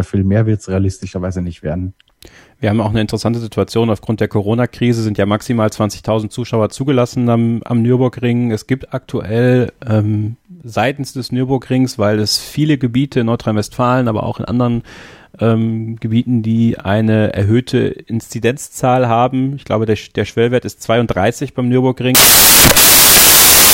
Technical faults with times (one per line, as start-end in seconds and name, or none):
22.15-23.73 samples built from the wrong bytes